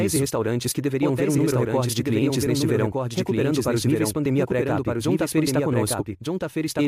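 From the start of the speech to the end, a doubled audio track runs underneath: a second full-band copy trails the original by about a second, a few decibels quieter, with no reverb tail or room colouring. This most likely comes from the signal being captured twice over paths of different latency. It sounds like a dry, overlapping echo. A spectrogram shows each speech pattern repeated about a second later, slightly fainter, and the waveform shows the same envelopes superimposed with that offset.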